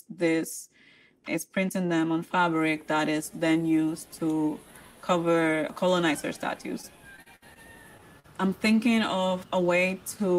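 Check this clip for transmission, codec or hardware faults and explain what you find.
Yes, the clip has transmission faults: a run of repeated packet loss, followed shortly by two brief concealed dropouts.

From 6.81 to 7.58 s the sound turns choppy and robotic, with pieces missing. This is repeated packet loss: five separate gaps, the longest about 61 ms, each patched by extending the preceding sound. About a fifth of that stretch is synthetic fill rather than real audio.

At 7.98 to 8.01 s and again at 8.20 to 8.26 s there are short smears, like a quick wobble. These are short concealed packet losses of about 20 ms and 40 ms. The receiver bridged each hole by continuing the last sound, then blended back into the real signal.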